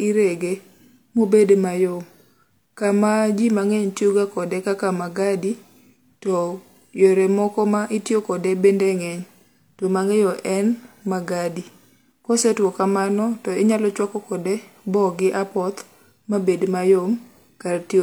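No technical faults are audible.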